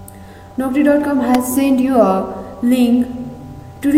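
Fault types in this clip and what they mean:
Electrical switching spike: a sharp snap at 1.35 s, likely a nearby switch or discharge arcing into the line. On the waveform it is a needle-thin spike; on a spectrogram, a narrow vertical stripe spanning all frequencies.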